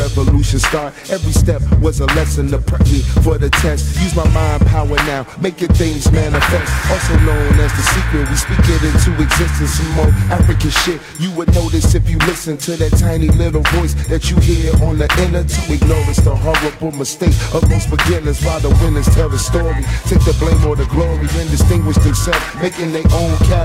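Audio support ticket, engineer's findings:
Periodic clock jitter, whole clip start to finish. Rough, metallic edge riding on everything, strongest on the bright high-frequency content, gone in silence. Probable component: converter clock getting shaken by interference, somewhere around 2 kHz. Each component picks up sidebands that far above and below it. Worth checking clock routing and nearby noisy supplies.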